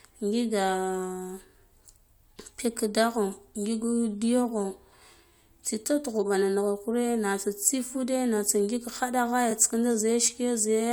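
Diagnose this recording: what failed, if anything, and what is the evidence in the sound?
A repeated frames fault at the codec or storage stage: one block of compressed speech was played twice, producing a brief stutter from 9.50 to 9.52 s. The repeated span is 21.3 ms, which fits a single codec frame, and it lengthens the recording by that amount.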